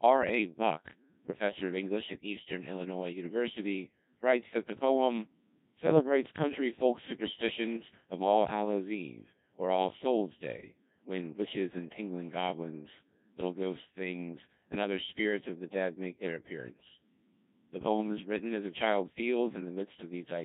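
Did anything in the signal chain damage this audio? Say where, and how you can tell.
Yes. The damage is at the codec stage: the speech went through a Codec 2 vocoder, and the heavy, uniform degradation points to a very low rate of around 1.6 kbit/s. Rather than carrying the waveform, the encoder kept only pitch, voicing, energy and a coarse spectral envelope, and the decoder rebuilt the voice from sine waves. That is why the whole clip sounds robotic and buzzy from start to finish, with the natural texture of the voice lost.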